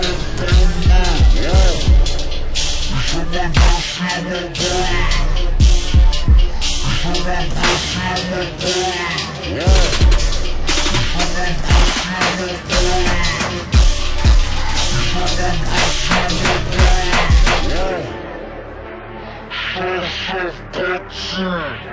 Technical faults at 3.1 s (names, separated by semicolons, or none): wrong sample rate